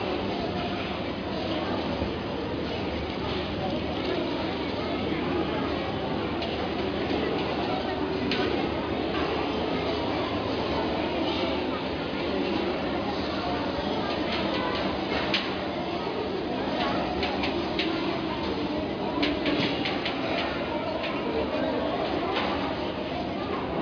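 No technical faults are audible anywhere in the recording.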